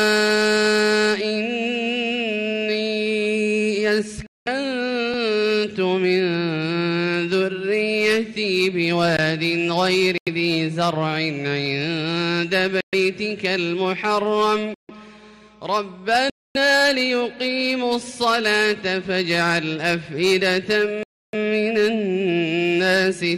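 The sound cuts to dead silence and then picks up again six times: at 4.27, 10.18, 12.81, 14.74, 16.30 and 21.03 s, with gaps between 89 and 301 ms long. These are Bluetooth stalls, likely caused by interference holding up packets until the headphones' buffer ran dry.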